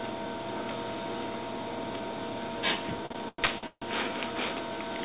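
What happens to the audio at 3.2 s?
At 3.2 s the sound is inside a run of repeated stalls (stutter) lasting from 3.06 to 3.84 s. Packets reached the receiver late, so its jitter buffer ran dry five times, and each time the last sound was stretched out to fill the wait, the longest about 148 ms. Nearly half of that span is filler, though nothing is lost. The audio drags and hiccups, and the whole clip stays band-limited to 4 kHz by the G.711 call codec.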